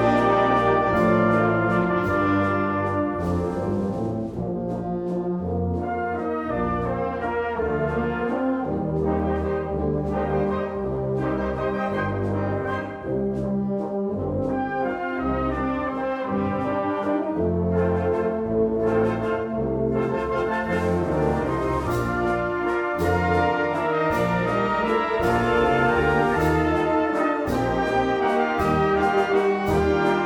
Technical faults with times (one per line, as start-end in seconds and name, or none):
none